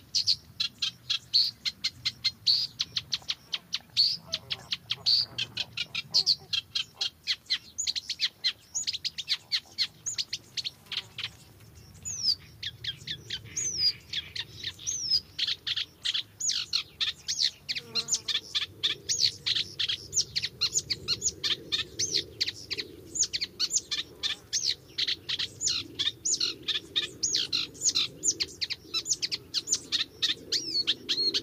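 No technical faults can be heard in this recording of sounds, so there are none to describe in time order.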